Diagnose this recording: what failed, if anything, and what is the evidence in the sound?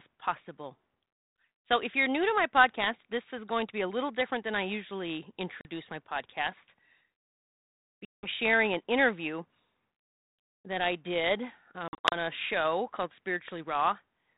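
Packet loss on an ADPCM call, at the network stage. Hard-edged silent holes appear at 5.61–5.67 s, 8.05–8.28 s and 11.88–12.15 s, where losses are scattered in runs up to 50 ms. With packets missing, the 32 kbit/s G.726 decoder's predictor and step size drift from the sender's, so speech resumes slightly distorted, then settles.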